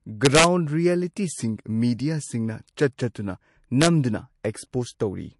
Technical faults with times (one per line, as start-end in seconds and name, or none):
0.00-5.39 low-bitrate audio saved at a high bitrate
0.25-0.44 integer overflow
3.82-3.87 integer overflow